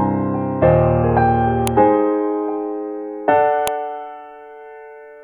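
A music recording with two sharp, loud clicks, at 1.67 s and 3.68 s. This is a file header played as audio. The sound was assembled from separate WAV pieces, and each piece kept its header. Those few dozen bytes of file information were read as if they were samples. The result is a brief snap that cuts across the music regardless of what it is doing. The clicks fall exactly 2 s apart, which fits pieces 2 s long.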